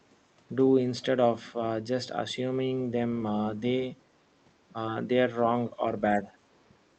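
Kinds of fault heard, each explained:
Speech suppressed in double talk: from 6.24 to 6.3 s the speech sags briefly, a shallow dip of roughly 5 dB lasting around 70 ms before the level recovers. The likely cause is an echo canceller meeting both sides talking at once: unable to tell the local talker apart from the loudspeaker's echo in the microphone signal, it turned the whole signal down for a moment, taking a small bite out of the speech.
Other side's voice leaking through: between 6.53 and 6.68 s a faint second voice slips in underneath, very low, roughly 40 dB below the main speech. It is likely residual echo: the far end's audio, played on the talker's loudspeaker and picked up again by the microphone, was not fully cancelled, so a brief trace of it got through, too quiet to stand out.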